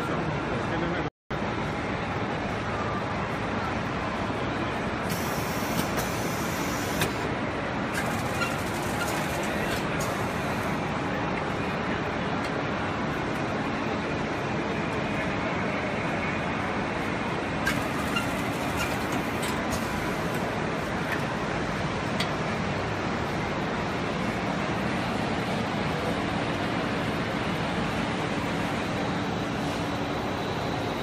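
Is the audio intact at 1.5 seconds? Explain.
No. At 1.5 seconds the sound sits inside a time-compressed catch-up running from 1.31 to 3.55 s: after a stall, small pieces are cut out and cross-faded, so it plays about 1.1 times fast. Unlike a simple speed-up, the pitch stays normal.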